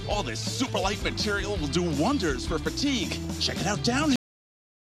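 At 4.16 s the audio has a cut-off end: the final buffers were never written or played, so the sound stops mid-event and drops straight to digital silence with no decay. That silence fills the remaining 0.78 s.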